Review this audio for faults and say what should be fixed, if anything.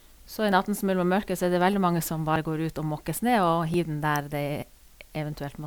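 A steady, even hiss sits under the speech from start to finish. That's low bit depth with dither: the audio has been reduced to 9 bits, and dither was added before rounding. The rounding error therefore comes out as smooth white noise instead of grainy distortion, at roughly 35 dB below the speech. It's clean in character. To prevent it, keep the signal at 16 bits or more all the way through, and only dither once at the final export.

There are also three points where the sound jumps forward with no silence: at 0.52 s, 2.36 s and 3.74 s. The ones at 0.52 s and 3.74 s each skip about 20 ms, and the one at 2.36 s skips around 70 ms. The likely cause is a dropped buffer (overrun), where the recorder didn't read its samples before the hardware overwrote them, so the two sides got spliced together. To prevent it, use a larger capture buffer or make sure the recording thread isn't starved.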